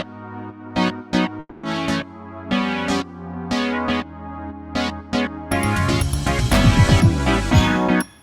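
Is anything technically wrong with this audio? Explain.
Yes. From 1.39 to 1.66 s the sound smears into a fading buzz for about 240 ms, then drops to silence before resuming; this is likely a long network dropout, where the receiver filled the gap and lost audio.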